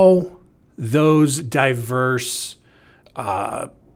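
Nothing stood out on listening to this speech recording.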